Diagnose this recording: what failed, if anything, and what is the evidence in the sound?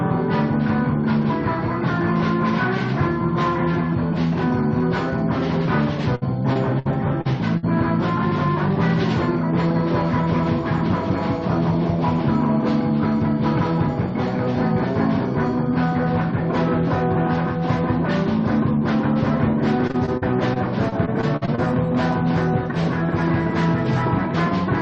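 The fault is in the network stage: repeated packet loss, heard as a robotic sound from 6.15 to 7.65 s and again from 19.87 to 21.60 s. Each stretch turns choppy, with holes up to 61 ms and 48 ms long covering roughly a sixth of the span. The receiver patches each hole by stretching the last good sound forward. Unlike a driver or buffer underrun, there are no hard clicks or silent drops, only this smeared, buzzy fill layered over the Opus call codec's roughly 12 kHz band limit.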